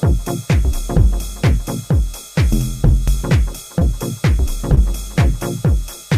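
A brief smear or wobble passes at 3.79 to 3.83 s and again at 4.75 to 4.79 s. Both are short concealed packet loss. About 20 ms of audio arrived too late each time, and the receiver extended the preceding sound to cover the gap before blending back into the real signal.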